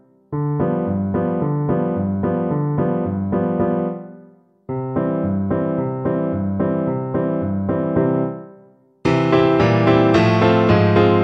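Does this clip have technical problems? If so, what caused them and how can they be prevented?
No technical problems are audible.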